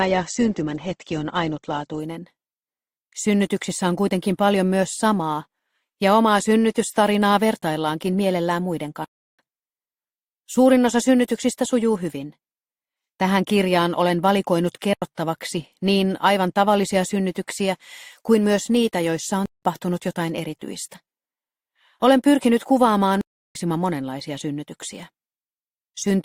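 For the first 2.0 s the audio sounds dull and smeared, with nothing above 8.4 kHz and heavier codec artefacts, and then it brightens abruptly with no gap. This is an adaptive stream starting at a low bitrate: the player began on a cheap version to start playback quickly, which sounds like Opus at around 16 kbit/s, and switched to a better rendition, consistent with about 64 kbit/s, once it had measured the connection. Later the sound drops out four times into dead digital silence, cutting off and back in with no fade: at 9.05 to 9.39 s (about 341 ms), 14.93 to 15.02 s (about 85 ms), 19.46 to 19.63 s (about 171 ms) and 23.21 to 23.55 s (about 341 ms). These are blocks of digital silence, where whole chunks of samples were replaced by zeros. The durations fit blocks of 16384, 4096, 8192 and 16384 samples, pointing to output buffers that were not filled in time.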